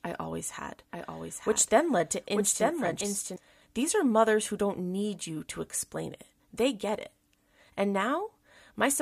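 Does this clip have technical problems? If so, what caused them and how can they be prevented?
Yes. From 0.93 to 3.36 s a doubled audio track appears: a dry, full-band copy trails about a second behind, about 5 dB quieter, and starts and stops abruptly, likely from a second, slower capture path. On a spectrogram the same patterns repeat, shifted right by a second. Route the signal through a single capture path and mute duplicate monitor or loopback inputs.

At 3.00 s, damaged data in a compressed stream makes the decoder lose sync and jump to the next frame. It shows as a discontinuity in the waveform. Transfer and store the stream with checksums or a reliable protocol so corrupted frames are caught and resent.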